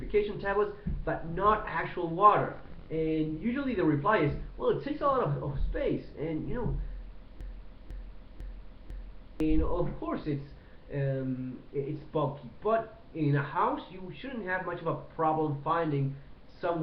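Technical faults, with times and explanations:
7.41–9.40 s, broken-record loop: one 0.5 s fragment plays four times back to back, identical each pass, replacing two seconds of audio. The player or stream likely stalled and kept resending its last chunk. Waveform and spectrogram show the same block stamped repeatedly.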